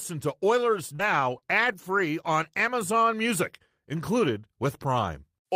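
Speech clip with scattered short gaps between 0.95 and 2.00 s: about three brief dropouts, the longest around 40 ms, patched by extending preceding sound, leaving small hiccups.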